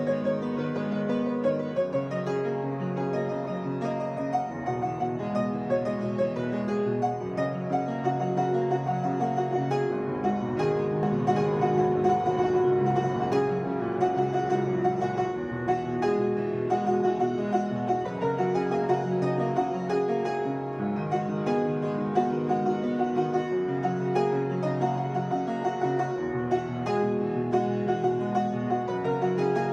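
From 11.03 to 13.33 s a doubled audio track appears: a second full-band copy trails roughly 0.7 s behind at about 5 dB lower, switching on and off abruptly. The likely cause is a slower duplicate capture path. Unlike an echo, it carries no decay or room colour.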